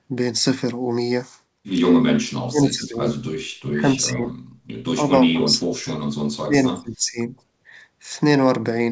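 Speech carried over a call path with nothing above 8 kHz has four stretches where it sinks deeply, by as much as about 40 dB: 2.31–3.1 s, 3.69–4.34 s, 4.97–5.84 s and 6.31–7.31 s. This is likely speech suppressed in double talk, not packet loss.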